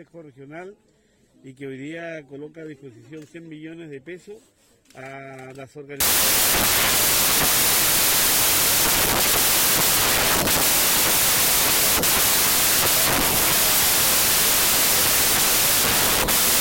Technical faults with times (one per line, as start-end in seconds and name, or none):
6.00-16.60 wrong sample width